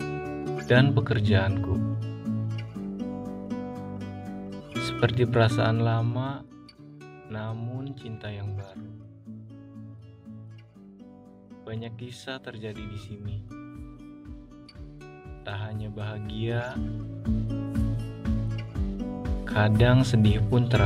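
The audio has zipper noise from 5.36 to 6.60 s, where the level drops by roughly 15 dB in coarse steps, around 40 a second, with no smoothing between them. Each jump leaves a tiny click, so a fast ticking rides on the sound while the level falls. A proper fade glides without any such texture, and that audible stepping is what marks this as zipper noise.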